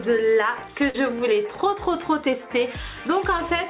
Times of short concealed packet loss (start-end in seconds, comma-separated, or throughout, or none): 0.90-0.96